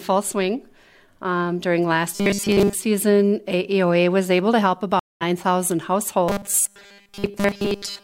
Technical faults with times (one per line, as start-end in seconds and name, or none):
2.15-2.75 robotic sound from repeated short buffers
4.99-5.22 stream reconnect
6.29-8.04 robotic sound from repeated short buffers